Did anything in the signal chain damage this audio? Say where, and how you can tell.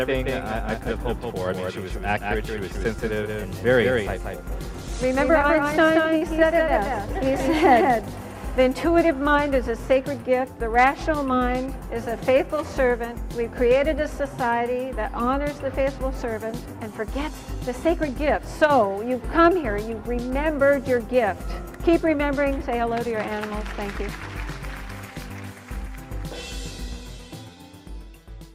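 Yes. From the very start until 8.65 s the sound has a clean, hard echo: a full-band second copy trails about a fifth of a second behind, roughly 5 dB quieter, with no room colour or decay. At 8.65 s it cuts off abruptly. This is a doubled audio track. It most likely comes from a second, slower capture path or an editing step that mixed two out-of-step copies together.

There are two brief glitches on the network side, at 6.02 to 6.06 s and at 6.18 to 6.34 s. Each is a short smear and wobble where the sound briefly holds on itself instead of moving forward. This is short concealed packet loss. About 20 ms of audio went missing each time, and the receiver's decoder filled the gap by extending the preceding sound before blending back into the real signal. The second repair also stretches the timing by a few milliseconds.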